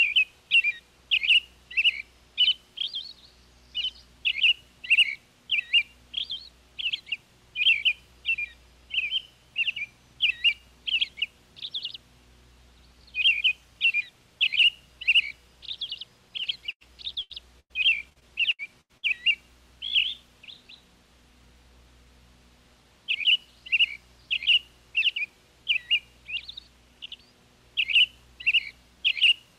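Repeated packet loss at 16.43–17.72 s and 18.10–19.05 s: gaps up to 98 ms were patched by continuing prior sound, leaving it choppy and robotic.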